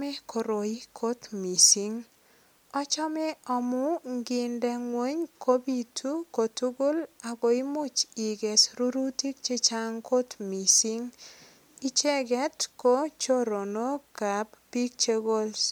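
No technical faults can be heard anywhere in the recording. The speech runs without a single audible break or disturbance.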